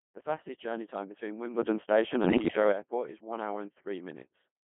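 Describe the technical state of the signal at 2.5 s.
At 2.5 s the speech is still passing through the Codec 2 vocoder that shapes the whole clip. The decoder does not reproduce the original waveform. It rebuilds the voice from sine waves driven by pitch, voicing, energy and a coarse spectral envelope. The sound is heavily damaged: robotic and buzzy, held within a band of 150 Hz to 3.4 kHz, with an artificial quality that fits a very low-rate mode around 2.4 kbit/s.

The moment also falls inside a burst of bit errors on digital voice radio, running from 2.24 to 2.56 s. Flipped bits reach the vocoder's parameter stream, where each bit steers pitch, level, voicing or spectrum for an entire frame. The synthetic voice therefore jumps erratically in pitch, loudness and tone colour, breaking into bleeps, warbles and gibberish. That points to roughly a few percent of bits corrupted across about ten frames.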